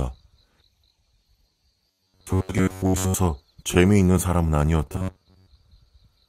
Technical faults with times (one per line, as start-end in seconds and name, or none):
1.88-3.14 robotic sound from repeated short buffers
3.55-4.61 scattered short gaps
4.93-5.47 robotic sound from repeated short buffers